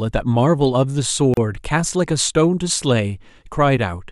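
At 1.34 s the speech breaks off into a silence of about 34 ms, ending at 1.37 s. This is a gap at a join of encoded pieces: separately encoded segments were spliced without trimming encoder delay and end padding. Unlike a dropout, nothing is lost; the speech resumes exactly where it stopped, with smeared edges.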